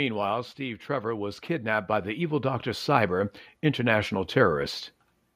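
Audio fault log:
0.57–4.64 s automatic gain rising. The level climbs steadily by about 12 dB over 4.07 s. The automatic gain control judged the input too quiet and raised its gain slowly. Speech and background noise swell together because both pass through the same gain.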